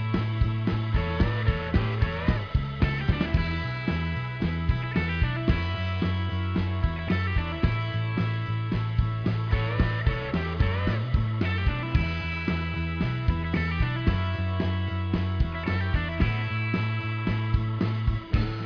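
Nothing technically wrong can be heard anywhere in this audio. There is nothing to time or trace to a cause.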